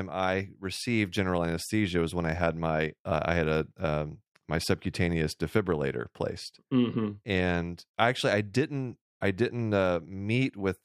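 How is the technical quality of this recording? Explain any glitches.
No glitches turn up anywhere in this speech recording, so there's nothing here to explain.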